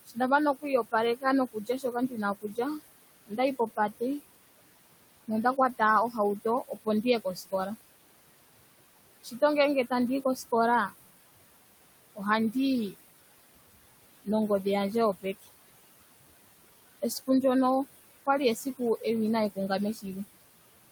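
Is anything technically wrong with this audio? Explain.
Yes, there's processing trouble. Noise suppressor artifacts run through the whole clip: the suppressor pulls the room noise, which sits about 15 dB under the speech, down by about 19 dB between phrases, then lets it rise back under the speech.

There's also speech cut by the noise suppressor at 0.06–4.02, 5.28–6.15, 6.68–7.53, 9.23–10.91, 12.15–12.94, 15.22–15.47 (just after "nongodhi yandje"), 18.26–19.03 and 19.56–20.05 s. It mistakes quiet speech for noise and ducks it by up to about 21 dB, so consonants and endings sound swallowed. That's roughly a second in total in the opening stretch, and a fraction of a second in each later one.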